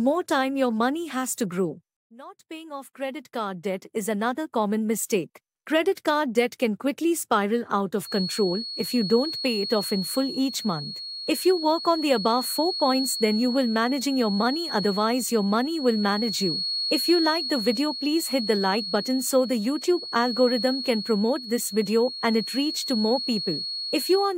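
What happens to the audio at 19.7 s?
At 19.7 s a feedback whistle is sounding. It runs from 8.01 s to the end of the clip. It is a thin, steady tone near 4.3 kHz, about 10 dB below the sound, swelling and fading slowly in level. A loudspeaker-to-microphone loop held just at the edge of feedback is the likely cause.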